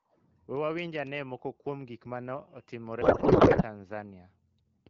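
From 3.01 to 3.64 s the speech gives way to garbled noise and warble that barely tracks the talker. This is a codec payload misread. The decoder is parsing frames with their fields shifted, which fits octet-aligned AMR being read as bandwidth-efficient, so the bits land in the wrong parameters. The result sounds like plausible but meaningless codec output. Around it, the AMR-WB stream at 12.65 kbit/s carries only light coding damage.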